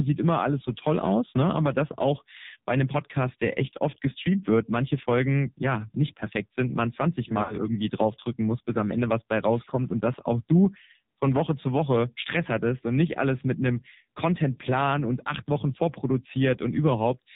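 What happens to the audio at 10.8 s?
At 10.78 to 10.81 s there is a lost AMR speech frame, and the sound points to a single 20 ms frame going missing. The decoder covers the hole by reusing the previous frame's pitch and vocal-tract settings at reduced gain, so what you hear is a brief dip or warble. Unlike a plain packet dropout, there is no hard silence or click at the edges. The gap is smoothed over with a faded copy of what came before.

Underneath this, and throughout, the audio runs through the AMR narrowband mobile codec with heavy damage. It fits a low mode of around 6 kbps. Everything above 4 kHz is gone, and the speech sounds buzzy and synthetic because the codec rebuilds it from a vocal-tract model driven by a few pulses. This coloring is steady across the clip and does not change at 10.8 s. That is what separates it from the short, localized concealment glitch.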